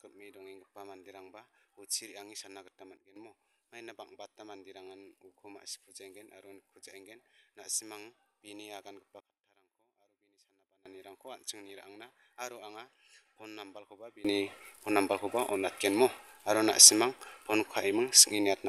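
At 2.97 s the level drops abruptly by about 12 dB until 3.16 s, then at 9.20 s falls by about 24 dB until 10.86 s, and from 14.25 s to the end it leaps up by about 21 dB. Each is a sudden gain jump, likely a digital gain change applied between adjacent samples with no ramp. Unlike a fade or compressor action, the background noise steps together with the sound, instantly.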